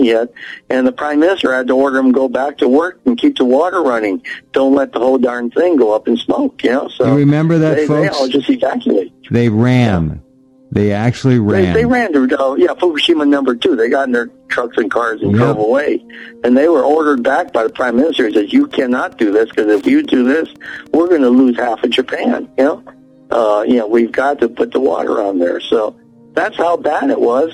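A steady ticking runs under the audio from 17.11 to 21.57 s, repeating every 102.4 ms, about ten times a second. It sits roughly 35 dB below the main sound. This is Wi-Fi interference: a nearby radio's beacon is being rectified by the audio circuit.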